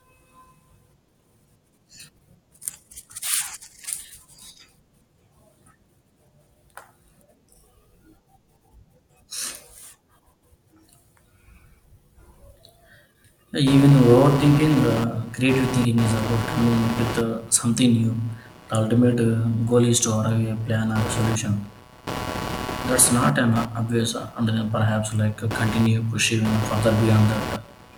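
From 13.67 s onward, computer activity noise buzzes at roughly 150 Hz, about 10 dB under the speech. It follows computer load through the shared ground, unlike steady mains hum.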